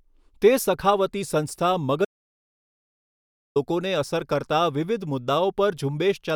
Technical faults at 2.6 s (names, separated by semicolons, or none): audio dropout to silence